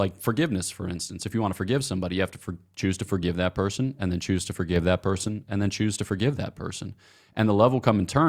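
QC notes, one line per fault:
4.76–5.28 s: sudden gain jump, likely a gain change applied instantly with no ramp; speech and background noise step up together by about 4 dB, then fall back.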